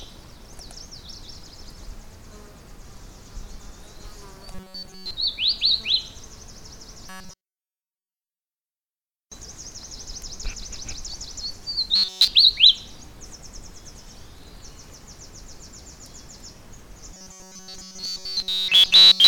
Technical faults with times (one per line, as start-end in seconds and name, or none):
4.51-5.11 robotic sound from repeated short buffers
7.10-8.40 robotic sound from repeated short buffers
11.96-12.28 robotic sound from repeated short buffers
17.14-19.27 robotic sound from repeated short buffers